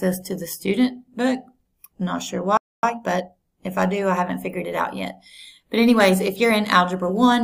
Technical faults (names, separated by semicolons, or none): playback stall; time-compressed catch-up